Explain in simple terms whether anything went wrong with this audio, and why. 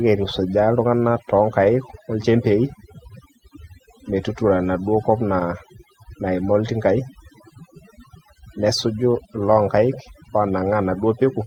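Overdone noise removal runs through the whole clip, from start to end. A noise reduction tool was set too strongly, so it cut away not just the background noise but quieter parts of the speech too, leaving near-silent gaps with twinkling specks.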